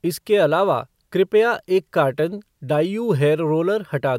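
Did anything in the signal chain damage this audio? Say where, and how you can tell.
No, nothing along the chain seems to have left a mark on this one; it all sounds just as it should.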